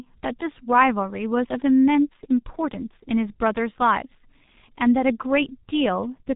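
Speech heard throughout through the G.723.1 codec: muffled below 4 kHz and hoarse, with consonants smeared by slow 30 ms frame updates, unlike plain band-limiting.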